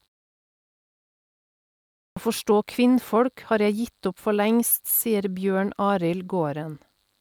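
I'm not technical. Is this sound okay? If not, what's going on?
No. At 2.09 s there's a clipped start after a pause: after about 2 s of silence, the playback device seems to have gone idle and needed time to wake, so roughly the first 75 ms of speech is cut and the sound begins abruptly.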